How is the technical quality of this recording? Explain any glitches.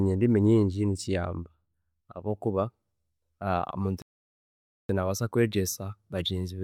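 The recording has one glitch, a playback stall from 4.02 to 4.89 s. The player likely ran out of data or had its thread blocked, so the speech cuts to silence for about 0.87 s before resuming at "nabaasa kwegyesa".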